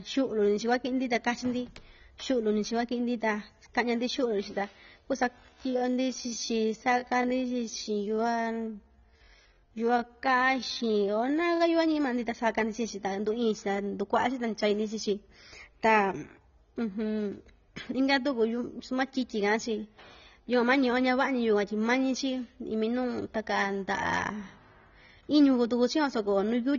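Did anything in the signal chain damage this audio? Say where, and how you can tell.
Yes, two stages left marks. The first is the codec, and it runs through the whole clip. The speech sounds dull and smeared, with a warbly, fizzy edge on sibilants. That's plainly audible damage from what's likely AAC compression, probably AAC-LC at a low rate consistent with roughly 24 kbps. The encoder pulls the cut-off down and starves the quantiser, so the top end vanishes and what's left gets smeared.

The second is a time-stretched section from 5.36 s to 11.62 s, likely added in editing or playback. The pace suddenly drops to about 0.64 times normal speed, but the pitch stays put. That stretch drags. The stretcher keeps the pitch by repeating short slices of the waveform to fill out the length.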